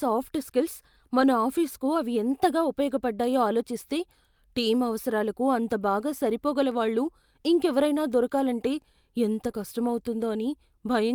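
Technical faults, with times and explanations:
1.21–1.27 s and 9.47–9.49 s: lost packet rebuilt from error correction. About 40 ms, then 20 ms, turn rough and noisy without any gap. That fits missing packets replaced by low-bitrate backup copies that arrived with the following packet.
9.51–9.55 s: short concealed packet loss. About 20 ms of audio arrived too late. The receiver extended the preceding sound for 18 ms, then blended back into the real audio. The result is a brief smear right after the earlier rough patch.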